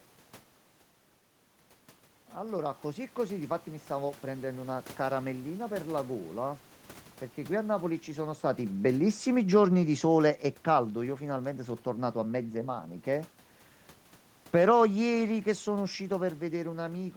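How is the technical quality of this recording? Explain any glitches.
There is one technical glitch. Automatic gain rising, 2.36 to 3.94 s: the gain control judged the input too quiet and raised its gain about 4 dB over that stretch, so the voice and the room noise swell together. The level change around 8 s comes from the talker moving relative to the microphone, not from the system.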